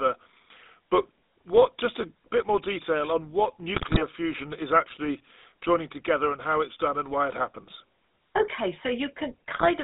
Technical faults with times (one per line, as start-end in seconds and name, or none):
0.00-9.83 GSM full-rate codec
3.74-4.04 GSM bit errors
9.52-9.68 GSM bit errors